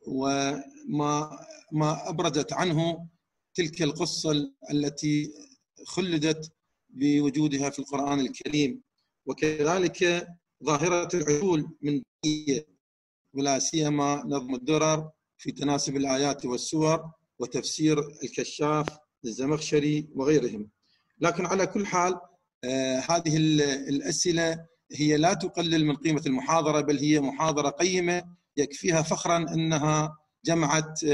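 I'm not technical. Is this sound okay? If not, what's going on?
No. There are two loud pops, one from 18.88 to 18.90 s and a softer one from 27.49 to 27.51 s. Each is a single sharp click lasting about two hundredths of a second, well above the surrounding level, while the sound carries on underneath. A brief electrical jolt, likely from a plug being moved, a switch, static or a glitching driver, was added to the signal and came out as these pops.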